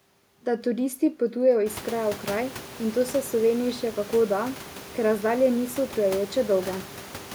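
No technical faults are audible.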